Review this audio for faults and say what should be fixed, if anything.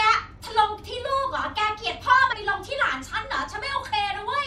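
At 2.31 s compressed frames are skipped: roughly ten 26.1 ms frames go unplayed, so the speech jumps ahead by about 300 ms. Unlike a dropout there is no silence, and the overlapping frames leave a short smeared blip instead of a hard click. To prevent it, verify the file's integrity after encoding and transfer, and re-encode from the source if frames are damaged or missing.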